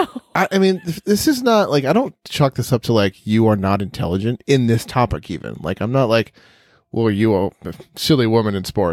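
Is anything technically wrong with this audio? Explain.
No technical faults are audible.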